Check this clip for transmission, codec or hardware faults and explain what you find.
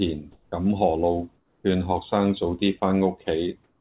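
Two kinds of fault appear, both from the sender going silent and the receiver filling in with synthetic noise, heard through a path with nothing above 4 kHz.

Comfort noise in place of the background occurs at 0.32 to 0.52 s, 1.36 to 1.64 s and 3.64 to 3.8 s. The real background gives way to a flat, featureless hiss about 2 to 4 dB quieter, likely because discontinuous transmission paused sending. Only background is replaced, so no speech is lost.

Sound dropped by the voice detector occurs at 2.8 s, where about 10 ms of speech is likely cut because the detector judged it background and steady noise filled in. Unlike the pauses, actual sound goes missing here.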